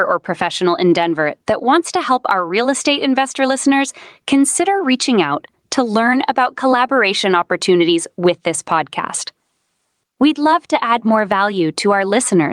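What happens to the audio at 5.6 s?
At 5.6 s the speech is caught in gain pumping, which runs through the whole clip rather than starting there. The level swings by around 15 dB, so loud and soft parts sit closer together and the sound is flattened and squashed. This is likely a fast limiter or compressor clamping down on input gain set far too high. On the waveform, peaks sit pinned at a near-constant ceiling.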